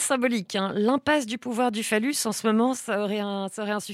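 At 2.77 s the speech drops abruptly by about 5 dB and stays at that lower level to the end of the clip, a sudden gain jump. The likely cause is a digital gain setting applied between one sample and the next with no ramp. What separates this from a speaker turning away or an automatic gain control easing down is that the background noise falls at the same instant and by the same amount, with no gradual slope.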